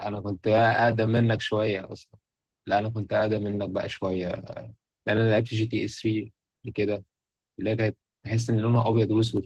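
Opus voice compression runs through the whole speech clip: the sound points to a low bitrate around 16 kbps in hybrid mode, with SILK's linear-prediction coding below 8 kHz and a thin CELT layer above, leaving the voice plainly hoarse, muffled and slightly robotic.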